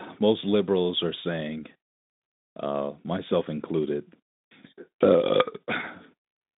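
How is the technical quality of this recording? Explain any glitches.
No technical faults are audible.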